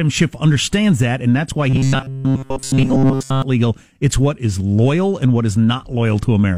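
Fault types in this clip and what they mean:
Robotic sound from repeated short buffers: from 1.69 to 3.42 s, just after "that and that's why", the speech turns into a rigid metallic buzz at 134 Hz, likely because audio arrived too seldom and a 7.5 ms slice was looped over most of it.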